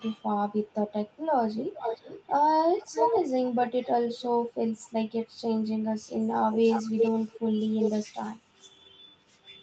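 Speech with an echo leak. A delayed copy of the speech returns at 0.63, 1.55, 2.79, 3.66 and 6.52 s. It lags by 339 to 446 ms. Its level ranges from barely audible to as loud as the speech. The likely cause is a loudspeaker echo canceller that let pickup through.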